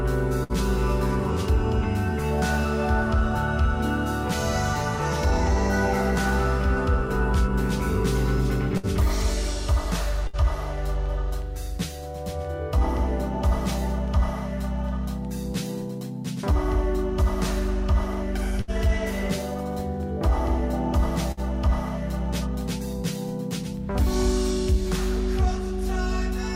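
A burst of packet loss occurs five times, at 0.43, 8.77, 10.27, 18.61 and 21.32 s. Each time, lost or late packets left a gap of about 53 to 65 ms, which the receiver filled by continuing the last sound while turning it down, giving a held buzz or fading hiss. About 60 ms of audio is skipped before playback resumes. A spectrogram shows a frozen, fading spectral slice, then an abrupt jump.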